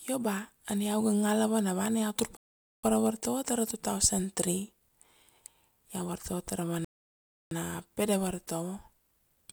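The speech drops to silence twice and resumes exactly where it stopped: at 2.37–2.84 s (about 0.47 s added) and 6.85–7.51 s (about 0.67 s). Both are rebuffering stalls, where the player ran out of downloaded audio and waited.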